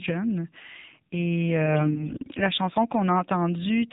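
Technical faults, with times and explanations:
throughout: AMR narrowband mobile codec. Nothing above 4 kHz survives, and the speech has a plainly audible buzzy, synthetic quality from a vocal tract model driven by sparse pulses. The coarseness points to a low bitrate around 7.4 kbps.
1.66–2.45 s: AMR bit errors. Flipped bits in the less protected parts of each frame misplace the excitation pulses and skew the finer pitch, gain and spectral values. Pitch and level hold roughly steady, but the speech turns hoarse, scratchy and gargly. This fits errors hitting dozens of frames, around one bit in twenty.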